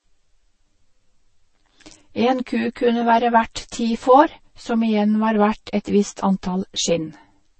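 One channel runs about 10 ms behind the other for the whole clip, and when the two are summed to mono the shared speech cancels at evenly spaced frequencies starting near 50 Hz. This channel delay produces comb filtering that leaves the voice hollow and phasey, with fixed notches.

Throughout, the speech also carries layered compression artefacts, with smeared, watery detail and nothing above 8.3 kHz. The likely cause is transcoding between lossy codecs, consistent with a low-bitrate MP3 pass followed by a Vorbis encode, each adding its own damage.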